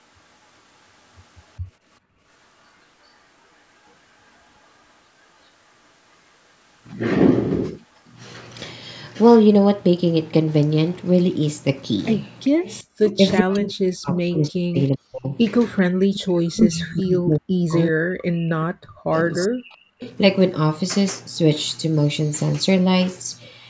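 At 2.0 to 2.23 s the room tone is background gated by the echo canceller. For about 200 ms it falls by about 38 dB while the far side plays, then returns. Only the ambience vanishes, with no trace of a copy, which separates it from an echo leak. A shorter dip of about 40 dB follows at 12.83 to 12.89 s.

Echo leaks appear at 3.04 to 4.68 s, 12.44 to 14.44 s, 16.0 to 16.93 s, 19.35 to 20.16 s and 22.24 to 22.56 s. Each is a copy of the speech arriving 392 ms late, likely loudspeaker sound that the far canceller failed to remove. The first and last are very faint. The 12.44 s one is clearly audible. A fixed-delay repeat of the speech itself, rather than room reverberation, marks it.

From 13.17 to 19.78 s the speech is likely suppressed in double talk. For roughly five seconds in total it dips by up to about 40 dB, breaking in and out while both sides talk. It is not a dropout, because the level is pulled down in pieces and does not stop cleanly.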